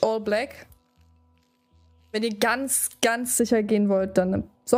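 From 3.40 s to the end, de-emphasis applied wrongly: an unneeded treble cut rolls the highs down smoothly, about 11 dB at 10 kHz against 1 kHz, so everything turns dull and muffled.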